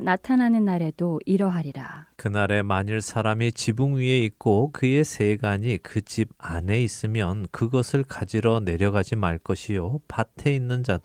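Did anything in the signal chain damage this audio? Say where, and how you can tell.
No, nothing in the chain damaged this speech. The Opus voice coding can be heard only as a light touch, with the full band kept, which fits a hybrid setting at around 24 kbps.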